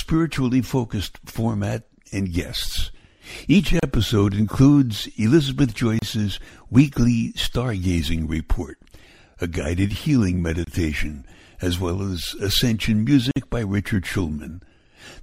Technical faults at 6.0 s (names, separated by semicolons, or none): gap at a join of encoded pieces